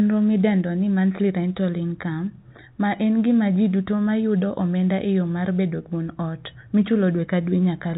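Nothing stood out on listening to this speech, which comes through the narrow band of an ordinary G.711 telephone line.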